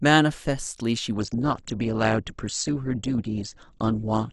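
Speech that switches abruptly to an adaptive stream at a lower bitrate at 1.17 s and stays there to the end. From that point nothing is heard above about 8.1 kHz, and the treble turns thin, with smeared, warbly codec artefacts. This points to a drop from roughly 64 to 12 kbit/s Opus after the connection slowed. Unlike a dropout, there is no gap or glitch, only a sudden step down in quality.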